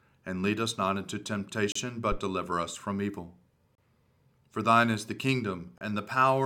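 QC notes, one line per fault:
1.72–5.81 s, gap between stream segments: the speech drops out three times with hard-edged silences, at 1.72 s right after "lead us not into" (34 ms), at 3.75 s after "deliver us from evil" (31 ms), and at 5.78 s (29 ms). They land almost exactly 2 s apart, which fits 2-second stream segments whose time stamps don't quite line up. The player fills each hole with silence, so nothing is lost, but the clean cut edges interrupt the sound each time.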